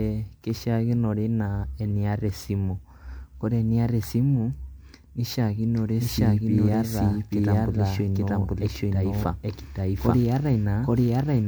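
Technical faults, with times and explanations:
Throughout, generation loss: the speech sounds swirly, smeared and hollow, with blurred consonant attacks, more damaged than a single 128 kbit/s MP3 pass would leave. This is likely repeated lossy re-encoding, around seven passes, each requantising on a shifted frame grid so noise and spectral holes accumulate.
5.77 s to end, doubled audio track: from 5.77 s a second full-band copy of the speech plays about 0.7 s behind the original at roughly equal level, entering abruptly with no decay or room colour. This is likely a second capture path or an edit leaving two offset copies.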